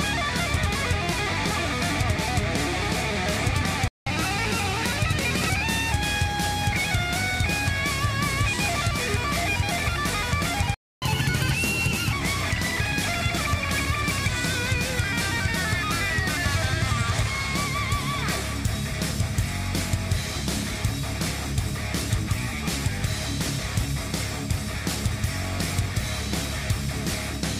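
The player most likely ran dry of buffered data, or had its output thread blocked, twice, producing a playback stall each time. The sound cuts off mid-flow and goes silent from 3.88 to 4.07 s, about 186 ms, and again from 10.74 to 11.02 s, about 277 ms, before resuming.

After each gap, the player works through its backlog by resampling faster, a catch-up at higher speed. Because resampling raises speed and pitch together, the sound is audibly hurried and sharpened for a while before settling back to normal. From 4.07 to 5.92 s it runs at 1.1 times normal speed, lifting pitch by about one and a half semitones. From 11.02 to 12.13 s the push is stronger, at 1.25 times speed, so the pitch rises by about four semitones.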